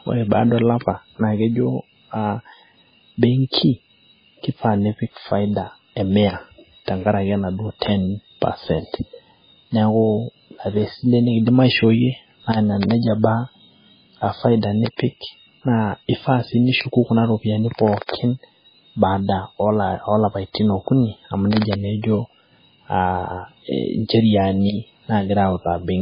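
Throughout the speech, nothing sounds above 5 kHz, and weak detail flickers in and out with a watery, swirling quality. Heavy MP3 compression is the likely cause, fitting a bitrate near 16 kbps. A spectrogram shows a hard ceiling at 5 kHz and patchy, blinking fragments below it.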